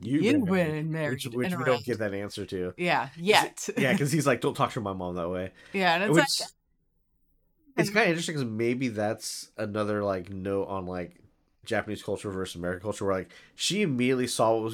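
Listening to the speech recording, nothing stood out as a technical fault at any point.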